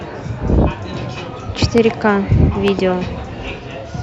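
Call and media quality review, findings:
Loud pop: sharp single click at 1.78–1.80 s, double pop at 2.68–2.81 s, well above speech level, speech continuing underneath. Likely a voltage transient from a plug, switch or driver glitch.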